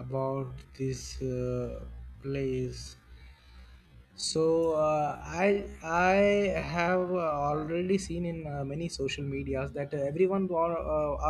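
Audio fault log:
0.0–7.9 s, time-stretched section: the speech runs at about half its normal pace (0.504×) yet keeps its original pitch, then snaps back to normal speed at 7.9 s. The slowing was likely done by repeating short overlapping pieces to pad the length, which makes the speech drag. On a spectrogram, formants and harmonics stay at the same heights but stretch sideways. The waveform shows elongated syllable envelopes.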